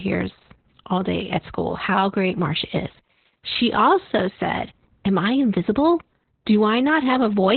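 From start to finish the speech carries heavy Opus voice compression damage. The sound points to a very low bitrate, around 8 kbps, which has pushed the coder into its SILK linear-prediction mode at narrowband, so nothing is present above about 4.3 kHz. With the excitation coded this coarsely, the voice comes out muffled, hoarse and slightly robotic. The frame-by-frame modelling lacks the detail needed to keep breath and consonant texture natural.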